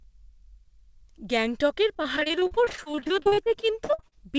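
Choppy, robotic speech from 1.94 to 4.14 s, with dozens of brief dropouts, the longest about 42 ms, comes from repeated packet loss: each lost or late packet was patched by extending the preceding sound, covering roughly a third of that stretch. Nothing reaches above 8 kHz, which fits a G.722 call path.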